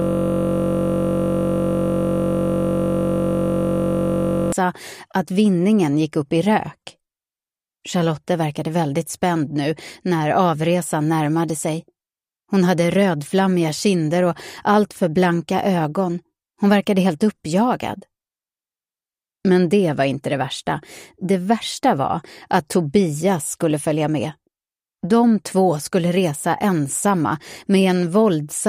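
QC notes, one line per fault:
0.00–4.52 s, system hang loop: already looping at the start, a 21.33 ms slice repeats over two hundred times, giving a steady 46.9 Hz buzz that fits a 1024-sample buffer.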